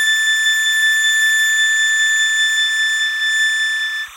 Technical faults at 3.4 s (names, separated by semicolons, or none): timecode bleed